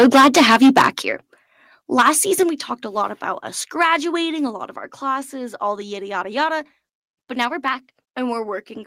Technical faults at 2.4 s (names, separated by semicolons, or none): microphone volume stepped down